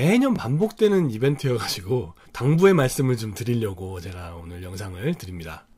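At 0.36 to 0.38 s a brief stutter interrupts the sound as a slice about 21 ms long repeats before playback jumps ahead. This is a Bluetooth stutter: late or missing data, consistent with a single lost packet, made the receiver replay its last buffer.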